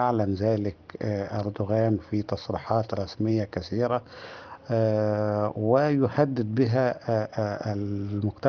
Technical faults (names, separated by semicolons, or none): aliasing